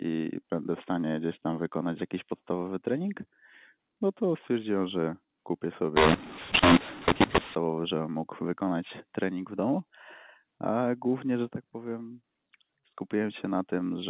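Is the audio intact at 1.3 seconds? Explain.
Yes, the speech is intact at 1.3 seconds, carried cleanly through its A-law telephone coding with no dropout, click or distortion at that moment.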